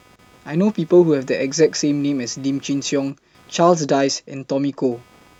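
Across the whole recording, computer activity noise sits under the speech: a faint buzzing chirp pulsing at around 300 Hz, roughly 35 dB below the speech. Processor or graphics load changes are disturbing the ground shared with the audio circuit. On a spectrogram it shows as thin vertical striations and a comb of harmonics on that spacing, continuing through pauses. In the waveform, gaps between phrases carry a small, regular ripple rather than silence.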